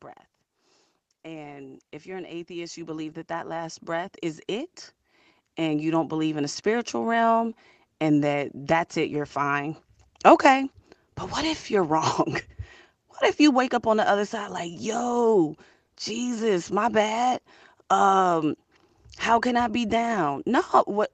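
Automatic gain rising, 1.22 to 6.67 s, in this speech clip: gain control judges the input too quiet and lifts voice and background together by about 17 dB.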